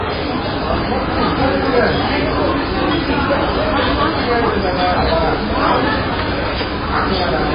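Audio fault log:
throughout, MP3 compression: The encoder was likely starved of bits, fitting a very low bitrate around 16 kbps. It discarded everything above 5 kHz and zeroed weaker frequency lines that then flicker in and out between frames. The audio is dull and boxed-in, with no treble past the cutoff. Heavy watery, swirling artefacts run across the whole clip, and sharp onsets smear because the coarse frames spread each attack in time.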